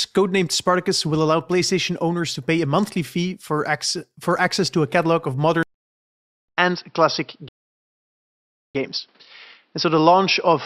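At 5.63 s, right after "to a catalog of", a 200 ms gap opens and the speech returns duller, with nothing above 5.6 kHz, a faint new noise floor and no change in loudness. This is likely an input switched to a poorer device. Unlike a filter or codec change, the new tone and background persist to the end.

Two rebuffering stalls follow, at 5.74 to 6.49 s and 7.49 to 8.75 s, adding 0.74 s and 1.26 s of silence. Speech picks up exactly where it halted, so nothing is skipped, unlike a dropout that loses audio.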